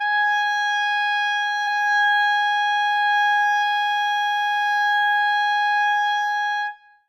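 Music with two skips where it jumps forward about a tenth of a second, at 1.67 s and 3.62 s: compressed frames skipped, a handful of frames each time, missing or rejected by the decoder.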